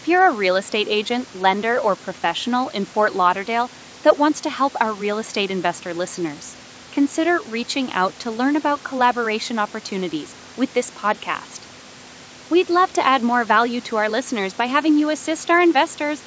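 Nothing stood out on listening to this speech, which carries the ordinary sound of call microphone processing with no content above 8 kHz.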